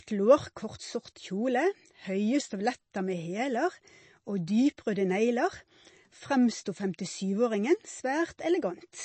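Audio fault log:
Throughout, MP3 compression: the speech has a hard top edge with nothing above 8.3 kHz, and clearly audible watery, swirling texture as weak frequency components drop in and out from frame to frame. The s sounds pick up metallic chirps and consonant onsets blur. This damage points to a starved encoder, likely MP3 at a low bitrate, which fits roughly 32 kbps, forcing it to cut the treble and discard quiet detail.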